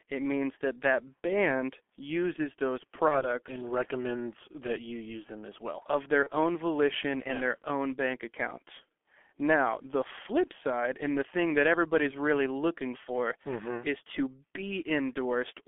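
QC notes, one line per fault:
throughout: G.723.1 codec. Speech is confined to roughly 250 Hz to 3.4 kHz and sounds heavily muffled and hoarse, with smeared consonants. The coarse, slowly updated voice model fits a low-rate G.723.1 link near 6.3 kbit/s, unlike plain band-limiting, which stays clean.
3.08–3.26 s and 6.23–6.30 s: VoIP packet loss concealed by the speech codec. Each gap is filled with a buzzy tone or coloured noise that fades, which fits one lost 30 ms frame. Speech stays weak for a short while after each gap, which sets this apart from a hard dropout.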